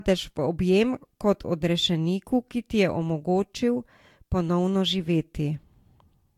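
Throughout, the speech sounds swirly and hollow, with smeared consonant attacks and nothing above 18.4 kHz. This is likely generation loss: roughly three successive lossy passes, consistent with Vorbis near 66 to 68 kbit/s, each requantising on a shifted frame grid, compounding noise and spectral holes.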